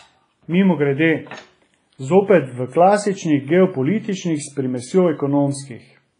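Throughout, the speech rings and smears, with hiss that breathes with the signal and nothing above 10.5 kHz. The likely cause is heavy WMA compression at a low bitrate, around 24 kbps: long transform blocks spread quantisation noise in time and zero weak components.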